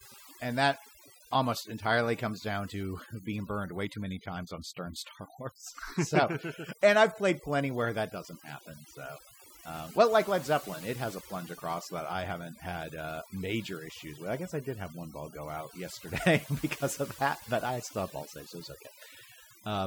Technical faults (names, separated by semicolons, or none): overdone noise removal